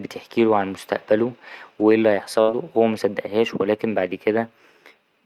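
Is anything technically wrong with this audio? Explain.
Yes. A burst of packet loss at 2.41 to 2.51 s: the receiver stretched the last sound into a fading buzz or hiss for about 64 ms, then speech resumed with roughly 60 ms missing.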